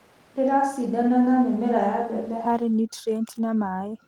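Switch to a distant microphone, from the start to 2.45 s: the speech sounds roomy and hollow, about 5 dB quieter with room noise around 30 dB down, likely from a fallback to a farther microphone. Lost packet rebuilt from error correction, 2.73 to 2.75 s: a brief 20 ms rough, noisy patch without a gap, which points to one lost packet replaced by its low-bitrate copy.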